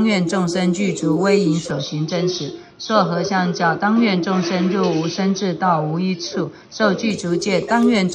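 From 1.71 s to 7.10 s the sound matches an input switched to a poorer device, likely a change of microphone or headset profile. Nothing passes above 6.1 kHz, so it turns duller, with a new noise floor well below the signal, no gap at the switch, and little change in level.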